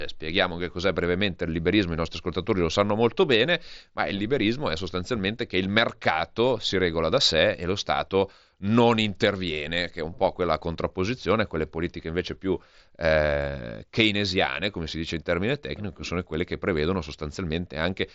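Speech, with no technical faults present. The sound tops out around 8 kHz with a light graininess on louder moments, the signature of a Bluetooth headset link carrying the mSBC wideband codec as designed.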